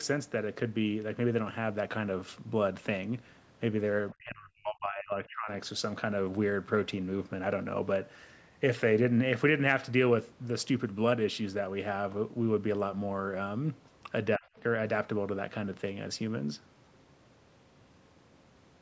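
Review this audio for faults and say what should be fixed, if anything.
From 4.13 to 5.49 s the speech sinks sharply, falling by roughly 35 dB at its deepest, and a brief dip of about 30 dB hits again at 14.37 to 14.46 s. This is speech suppressed in double talk, likely from an echo canceller that couldn't tell this talker apart from loudspeaker echo while both sides spoke, so it attenuated everything together. A double-talk detector tuned to favour the near-end talker, or a headset, would prevent it.

From 14.57 to 14.63 s a faint scrap of a second voice slips in, roughly 30 dB below the main speech. It is a brief case of the other side's voice leaking through: the far end's loudspeaker playback was likely picked up by the microphone and not fully cancelled. It is quiet and comes right after the dip. Stronger residual-echo suppression or lower loudspeaker volume would prevent it.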